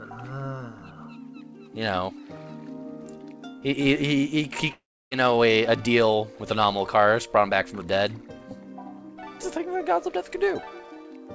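From 4.72 s to 5.14 s the audio breaks off. The last sound is stretched into a buzzy, fading continuation, and then comes roughly 0.3 s of near silence. When the signal resumes, about 0.4 s of material is simply gone. That pattern points to a likely long network dropout, with the receiver's concealment filling the gap and then giving up. The call path's band limit is present throughout: nothing above 8 kHz, which fits a wideband codec such as G.722.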